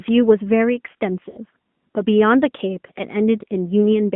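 Throughout, the speech sounds narrow, buzzy and somewhat synthetic, confined to a telephone band of about 150 Hz to 3.4 kHz with nothing above. This is the AMR narrowband mobile codec, whose pulse-driven vocal tract model is running at a reduced bitrate, which fits the 10.2 kbps mode, so its damage is plainly audible.

From 1.30 to 1.39 s, the speech smears into a drawn-out, warbling sustain and sags in level before recovering. These are lost AMR speech frames. For about 60 ms, which fits three 20 ms frames, the decoder repeated its last good pitch and vocal tract settings at falling gain.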